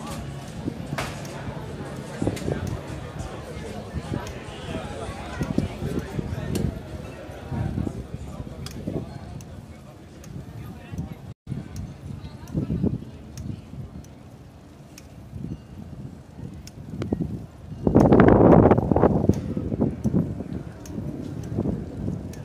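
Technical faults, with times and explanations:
11.32–11.48 s, playback stall: the sound drops out for about 140 ms, likely the player starving for data or its thread getting blocked, then picks back up.
17.02 s, loud pop: one sharp pop sits on top of the sound, roughly 15 dB above it, likely a voltage spike from a switch, static or a driver hiccup.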